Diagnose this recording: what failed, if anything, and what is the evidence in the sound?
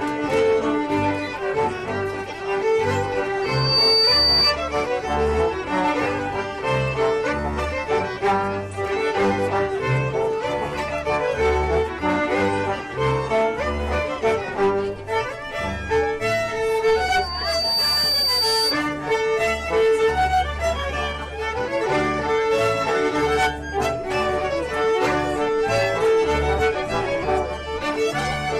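Loudspeaker feedback squeal in the microphone-to-loudspeaker loop: a 4.6 kHz tone swells at 3.42–4.54 s, topping the sound within half a second, and at 16.84–18.84 s, building over about a second. Loop gain exceeds one there; unlike a steady interference whine, it grows.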